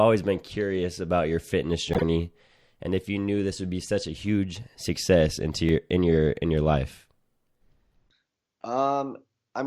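Speech clip with two kinds of playback fault. From 1.93 to 2.03 s a corrupt frame was decoded: damaged compressed data, spanning roughly four frames, was played anyway, so misread gains and codes throw energy to the wrong frequencies and produce a brief chirpy burst lasting about 0.1 s. At 5.69 s and again from 8.62 to 8.64 s there is a repeated buffer. Audio arrived late, so an 11.6 ms block was replayed once at the first point and twice at the second. Each repeat gives a hard-edged click or short buzz, which fits a 512-sample buffer, and no meaningful audio is skipped.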